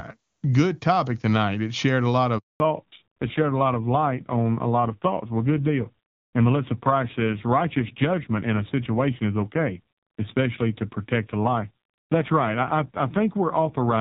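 At 2.38 s, just after "shared a lot", the call goes through a handover gap. The phone switched the call from one network to another, and no speech frames came through during the switch. The sound fades out within a few tens of milliseconds and stays silent for 0.22 s, until the new link starts at 2.6 s. Whatever was said in that stretch is gone.

From 2.6 s to the end, the call has fallen back to narrowband. Up to that point the HD Voice path, which sounds like AMR-WB at a high rate, carried clean wideband speech. After the handover the new link uses the older AMR-NB codec, and its raspy texture points to a low mode, around 5.9 kbit/s. Nothing is left above 4 kHz, so the voice turns duller and more muffled, and it takes on a grainy roughness.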